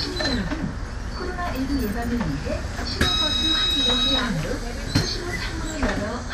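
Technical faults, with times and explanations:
Throughout, MP2 compression: the audio was likely squeezed through an MPEG Layer II encoder at a low rate, around 80 kbps, starving its sub-bands of bits. Nothing survives above 15.1 kHz, and coarse quantisation leaves a dull, plainly audible gurgling, granular texture.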